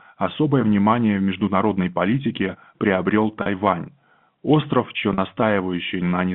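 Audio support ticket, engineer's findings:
Packet loss with pitch repetition, 3.42–3.46 s and 5.14–5.18 s. Brief held, buzzy sound, 40 ms each, fitting two 20 ms packets. Receiver concealment repeating last pitch period across gap. Telephone band 150 Hz–3.5 kHz, G.711 A-law line.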